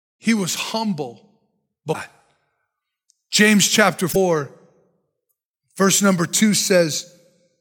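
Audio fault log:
1.90–1.95 s and 4.09–4.16 s, damaged data in a compressed stream: brief disruptions as the decoder misreads corrupt frames and loses sync, unlike dropouts, which leave silence.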